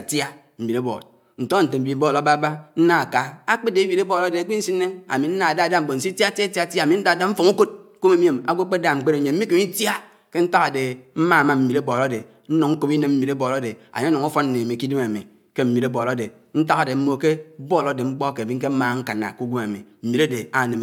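No technical faults are audible.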